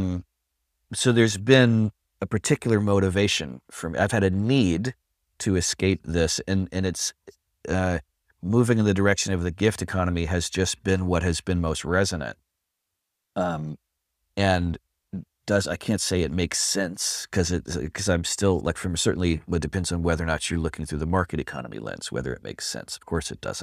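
No technical faults are audible.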